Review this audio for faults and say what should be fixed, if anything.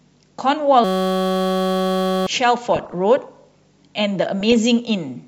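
From 0.84 to 2.27 s the speech is replaced by a system hang loop: playback froze and the hardware kept recycling one 5.33 ms slice of its ring buffer, which fits a 256-sample buffer. Repeated hundreds of times, that slice becomes a steady 188 Hz buzz, and about 1.5 s of speech is lost. On a waveform it appears as one identical cycle tiled end to end. On a spectrogram it shows as flat horizontal lines at 188 Hz and its multiples. To prevent it, fix the driver or system stall and have the audio path output silence rather than replaying the stale buffer when it is starved.

DAB burbling appears at 2.69 to 2.94 s and again at 4.40 to 4.52 s. Weak reception let bit errors, at a rate of a fraction of a percent, slip past error correction into the MP2 stream, so a run of frames decoded with corrupted samples and scale factors. Individual sub-bands jump in level for up to a frame, giving short noise blips and level jumps over the speech. 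On a spectrogram this looks like scattered rectangular blocks in single frequency bands, each lasting up to a frame. To prevent it, improve the antenna or signal strength so reception stays above the error-correction threshold.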